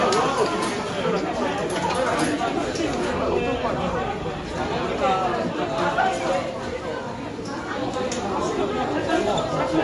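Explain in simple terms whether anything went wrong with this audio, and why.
Likely MP3 compression squeezed the audio too hard. The treble is cut off above 11.3 kHz, leaving the sound dull and audibly damaged from start to finish.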